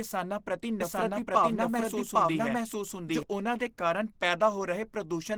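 It's a speech clip that sounds muffled and hoarse throughout, with plainly audible codec damage; that's likely Opus compression running in its hybrid speech mode, which fits a low rate of around 16 kbps. From 0.81 s to 3.23 s there's a doubled audio track. A second copy of the speech, about as loud as the original, trails roughly 0.7 s behind, with no decay or room colour, and it cuts in and out abruptly. It was likely captured twice over a slower path, or an edit left two copies out of step.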